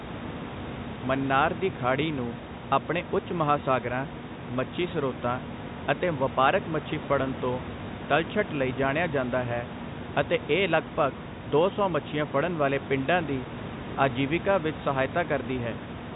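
No technical faults are audible.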